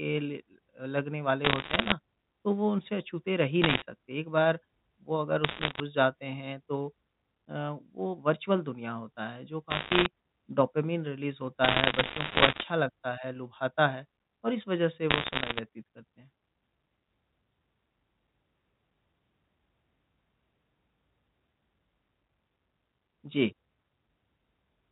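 Bit errors on a digital phone line crackle at 1.44–1.92, 3.62–3.82, 5.44–5.80, 9.70–10.06, 11.64–12.64 and 15.10–15.60 s. Flipped bits, around one to two percent, corrupt single mu-law samples into sharp ticks over the speech.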